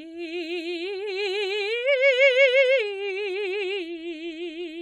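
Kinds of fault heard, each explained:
No faults heard in this music.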